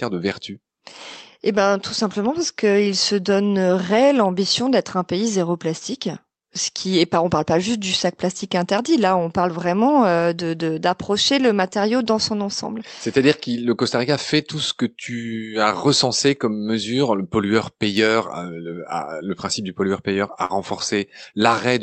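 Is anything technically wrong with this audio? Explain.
Yes, the last couple of seconds of this speech clip have packet-loss damage from a call path.

First, there are nine lost packets rebuilt from error correction, scattered from 19.51 s to 21.22 s, each covering 20 ms. Each lost packet's content rode along as a low-bitrate copy inside the next packet, so the decoder played that copy instead of leaving a hole. You don't hear gaps, just brief patches that turn rougher and grainier than the surrounding speech.

Second, there are two spots of short concealed packet loss, where neither the packet nor a backup copy arrived in time. From 20.45 s to 20.55 s, 40 ms went missing and the decoder filled it by extending the last bit of sound, stretching things by roughly 10 ms. From 21.30 s to 21.34 s, 20 ms went missing with only 13 ms synthesised. Both come across as quick smears or a wobble before the real audio blends back in.

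All of this sits on an Opus call path whose audio tops out around 8 kHz, coded at roughly 40 kbps.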